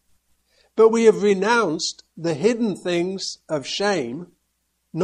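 Throughout the clip, a watery, swirly texture and a dulled top end point to heavy MP3 compression, likely at a low bitrate around 64 kbps. A spectrogram would show a flat treble cut-off and flickering, patchy high-frequency blocks, while transients in the waveform look smeared.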